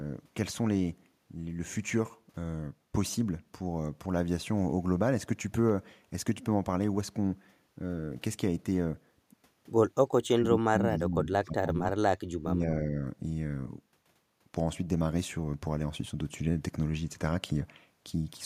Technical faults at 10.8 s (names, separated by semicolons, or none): speech suppressed in double talk